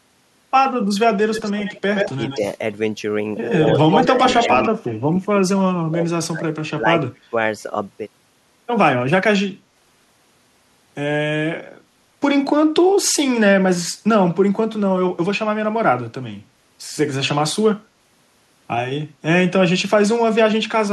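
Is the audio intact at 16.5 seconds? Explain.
Yes, the speech at 16.5 s runs through without any dropout, click or other fault.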